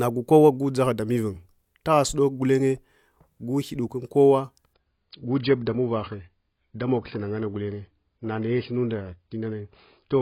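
A speech recording drops into an adaptive stream at a lower bitrate from 4.74 s to the end. The change is sudden, with no gap or dropout. Above about 5.1 kHz nothing remains, so sibilants lose their bite and the treble turns dull. Coding artefacts rise at the same moment. The step in quality points to the player switching from around 96 kbit/s AAC to about 16 kbit/s after the connection slowed.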